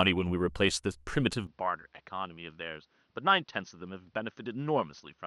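At 1.47 s the speech turns duller and about 10 dB quieter, with nothing above 6.3 kHz and a faint new background noise, with no gap at the change. This is likely an input switched to a poorer device, which holds to the end.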